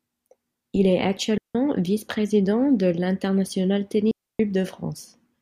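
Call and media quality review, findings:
Digital wireless dropout, 1.38–1.55 s. Speech cut to near silence for about 0.17 s. No noise burst either side; receiver muted with a very short fade after losing too much link data.

Digital wireless dropout, 4.11–4.40 s. Same clean hole, longer at about 0.28 s. Wireless receiver again the probable component.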